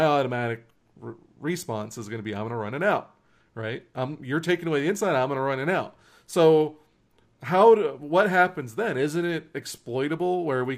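No technical faults can be heard anywhere in it.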